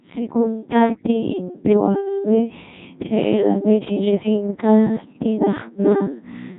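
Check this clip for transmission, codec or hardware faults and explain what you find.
Yes, three faults are audible in this speech clip.

Channel delay (doubling), throughout: one channel arrives about 46 ms late, fitting a 2048-sample buffer, so the mono sum carries a distinct slap-back copy.

Codec 2 vocoder, throughout: only pitch, voicing, energy and spectral envelope survive, resynthesised from sine waves. The heavy robotic buzz suggests a rate near 1.6 kbit/s.

Bit errors on digital voice radio, 0.85 to 1.06 s: a few percent of flipped bits corrupt frame parameters, so the voice lurches in pitch and level into warbling gibberish.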